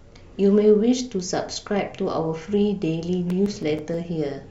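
A speech recording with CD scratch ticks: seven small ticks from 3.14 to 4.10 s, about seven per second, one per disc revolution where a scratch beat the error correction and the player patched or muted a few milliseconds. A spectrogram shows thin, evenly spaced vertical lines; the waveform shows tiny notches or flattened gaps.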